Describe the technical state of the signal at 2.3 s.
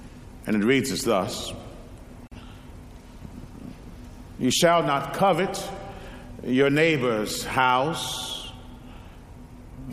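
At 2.3 s there is a gap at a join of encoded pieces. Separately encoded segments, apparently about 10 s long, were spliced without trimming, so one piece's padded final frame and the next piece's encoder start-up delay both remain as dead air. From 2.27 to 2.32 s the continuous sound drops out for about 43 ms, with its edges smeared by the codec, then resumes exactly where it stopped.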